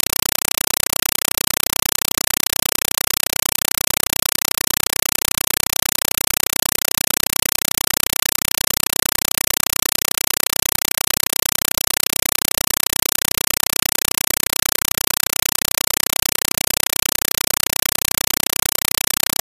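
From the very start and right through to the end, this is a compressed stream played as audio: the receiving end took an encoded bitstream as plain samples instead of decoding it. What you get is chattering static in place of the sound, with a noise burst about 5.33 ms long repeating 31.25 times a second and gaps between them. That burst pattern fits AC-3 frames, around a 256 kbps stream.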